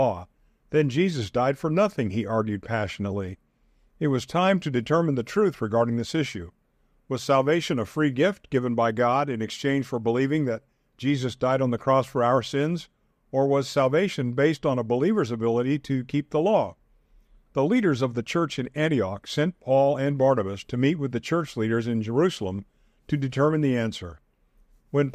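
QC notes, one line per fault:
No faults found in this speech clip.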